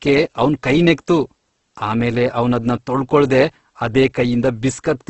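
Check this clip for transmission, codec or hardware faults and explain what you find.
There's one fault, and it runs through the whole clip: Opus compression, likely at a low bitrate. The speech has nothing above 8.2 kHz, so it sits in a wideband-only band with the top end gone. The damage is heavy. Bands the encoder couldn't afford got filled with folded or noise content instead of going silent, so there's little swirl, but the speech comes across rough and grainy. That graininess points to the music-style CELT mode working at roughly 12 kbps.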